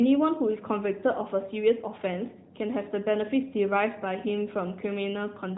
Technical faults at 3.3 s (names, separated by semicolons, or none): AMR narrowband mobile codec